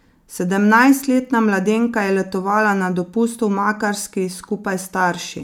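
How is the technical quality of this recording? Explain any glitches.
No glitches turn up anywhere in this recording, so there is nothing to explain.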